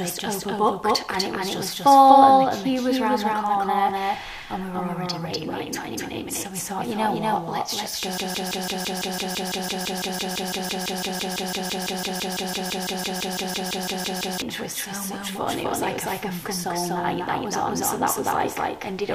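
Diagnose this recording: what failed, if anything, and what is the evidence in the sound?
A doubled audio track runs throughout: a second full-band copy sits roughly 300 ms behind, at about equal level, with no decay, showing as a shifted duplicate on the spectrogram. This is likely a second capture path in routing or playback.

A broken-record loop runs from 8.18 to 14.42 s: a 167.6 ms fragment repeats exactly, forming identical tiled blocks on the spectrogram. This likely comes from a stalled player or stream buffer.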